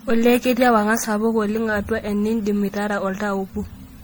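A speech recording with generation loss throughout: the sound is swirly, hollow and smeared, with blurred consonant attacks, likely from about five successive MP3 encodes at what sounds like 64 kbit/s. A spectrogram would show accumulated spectral holes and smeared onsets, with nothing above 20.8 kHz.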